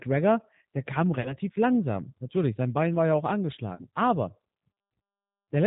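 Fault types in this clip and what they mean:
G.729 codec: The speech sounds plainly rough and slightly synthetic, with nothing above 4 kHz. This fits a low-rate VoIP codec around 8 kbit/s that rebuilds each 10 ms frame from a vocal tract filter, a pitch predictor and a few pulses.
VoIP packet loss concealed by the speech codec: After "der kam" near 1.21 s and after "war ja auch" near 3.75 s, the sound smears into a buzzy tone or coloured noise that fades. About 40 ms of audio went missing each time, and the decoder filled it from its last pitch and filter.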